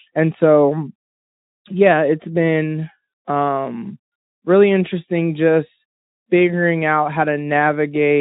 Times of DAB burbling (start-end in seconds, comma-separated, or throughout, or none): none